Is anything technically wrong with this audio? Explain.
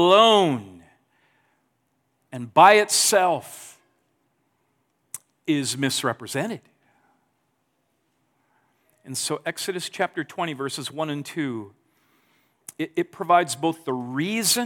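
Yes. There are three overlaps between stream segments, at 2.94 s (after "and by"), 10.92 s, and 12.91 s (before "it provides"). Where 2-second segments meet, about 15 to 20 ms of speech is trimmed away, giving a tiny skip. On the waveform this appears as a discontinuity, and on the spectrogram as a thin vertical broadband line.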